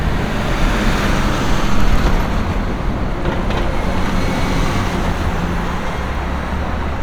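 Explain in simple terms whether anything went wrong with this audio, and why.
Nothing went wrong here as far as the ear can tell, so there's nothing odd to point to anywhere in the recording.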